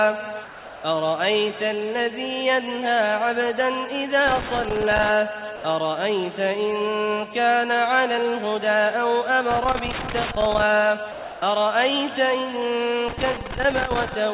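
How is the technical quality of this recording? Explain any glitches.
The recording has two recurring faults: short gaps filled with flat noise, and three bursts of crackle. It arrives over a narrowband call path with nothing above 4 kHz, which fits G.711 mu-law at 64 kbps, so it sounds dull and telephone-like.

Sound dropped by the voice detector occurs at 0.44–0.84 s, 5.56–5.64 s and 11.12–11.42 s. The audio gives way to a steady, featureless hiss lasting 400 ms, 80 ms and 300 ms respectively. About 200 ms, 60 ms and 210 ms of real sound go missing. The likely cause is the sender's voice activity detector classing that material as background and stopping transmission, with the receiver inserting comfort noise until the detector triggers again.

Loose connector crackle appears at 4.28–5.09 s, 9.51–10.62 s and 13.08–14.14 s, each burst lasting roughly 0.8 to 1.1 s. It is an irregular scratching and popping layered over the sound. 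A worn or dirty contact somewhere in the cable or jack is making and breaking rapidly as it shifts, chopping the signal into fragments. Any DC present on the line turns each break into a click.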